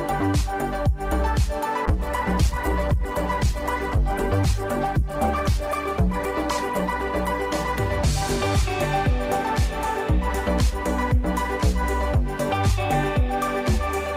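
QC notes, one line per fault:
1.87–8.91 s, call bitrate drop: the encoder fits a fall from 48 to 11 kbps, so coding coarsens and the spectrogram's upper band empties until recovery.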